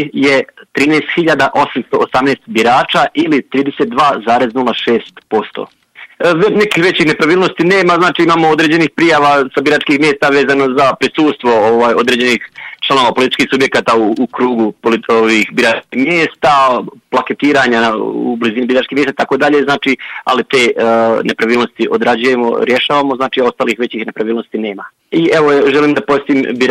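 The signal holds steady from beginning to end, with no dropouts, level jumps or timing disturbances anywhere in the audio.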